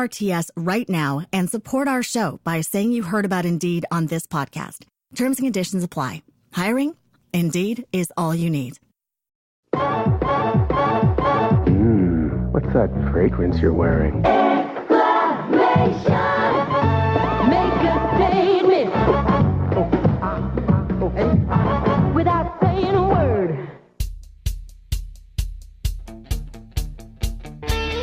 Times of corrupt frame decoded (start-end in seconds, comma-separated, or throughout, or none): 13.74-13.77